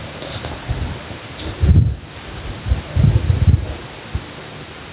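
A speech clip with gain pumping throughout, with the gain swinging by around 10 dB. Loud and soft passages sit squashed close together. The likely cause is input gain set far too high, with a fast limiter pulling it back down. The room noise sits about 36 dB below the speech, and nothing comes through above 4 kHz, which fits a G.711 mu-law call path.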